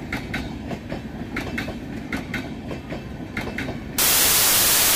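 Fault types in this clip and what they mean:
wrong sample width: From 3.98 s to the end, packed 24-bit samples are read as 32-bit values, so bytes from neighbouring samples merge into loud noise with the sound buried inside, running about 1.33 times fast and pitched up. Unlike plain clipping, the signal itself is scrambled.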